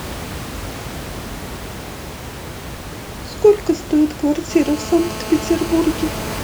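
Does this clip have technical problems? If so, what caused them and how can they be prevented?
Yes. From 4.51 s to 6.39 s there's a GSM phone buzz, a harsh, raspy drone at about 217 Hz, full of harmonics and sitting roughly 15 dB under the speech. A 2G phone was close by and mid-call, pulsing its transmitter 217 times a second. The audio circuitry rectified those radio bursts, so the buzz stays nearly steady and has nothing to do with what's being said. The room noise underneath, about 12 dB below the speech, is just the space itself. To prevent the buzz, keep phones switched off or well away from the mic, cables and interface while recording.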